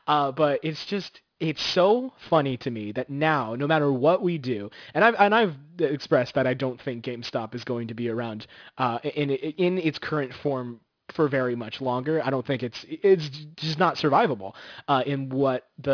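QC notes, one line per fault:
Throughout, aliasing: the esses and other sibilants come out gritty and metallic, with energy piled right up to about 5.5 kHz, which points to a drop to around 11 kHz with no filter first, so higher content folds back as unrelated tones roughly 20 dB under the speech.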